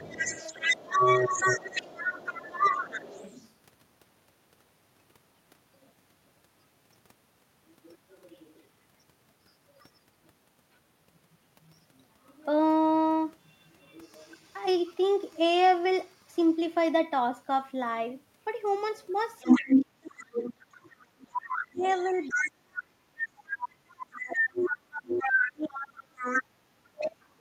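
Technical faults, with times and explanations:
0.0–3.52 s, 19.4–22.82 s, 23.51–26.43 s and 27.0–27.08 s, other side's voice leaking through: a second voice rides under the talker, roughly as loud as the talker in the first two stretches, a bit quieter from 23.51 s, and just a faint blip at 27.0 s. That's likely the far end playing on the talker's loudspeaker and getting back into the mic, with the echo canceller not stripping all of it out.
19.45–20.91 s and 21.72 s to the end, speech suppressed in double talk: the talker's own voice keeps dipping and dropping out, about a second's worth in the first stretch, with the deepest cuts around 35 dB. Both sides are talking at once here, and the echo canceller likely can't tell the talker from the loudspeaker echo, so it pulls everything down together. That's why the talker's voice gets clipped in pieces while the other voice is present.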